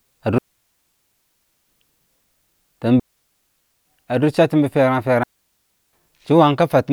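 At 0.38 s the speech drops into near silence for 1.3 s, returning at 1.68 s. This is a digital wireless dropout. The radio link lost too much data, so the receiver muted with a very fast fade. A second hole runs from 3.00 to 3.85 s, about 0.86 s long. A third runs from 5.23 to 5.93 s, about 0.70 s. Each gap is clean. No noise burst comes before or after.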